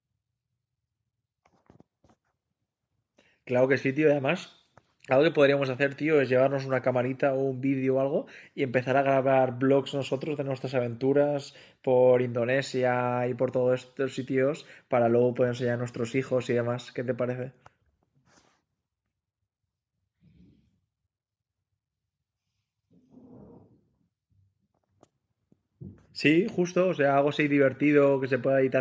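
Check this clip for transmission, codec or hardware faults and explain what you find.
Nothing faulty found in the speech: the band stops at 8 kHz and the lowest bass is trimmed, both normal for call microphone processing.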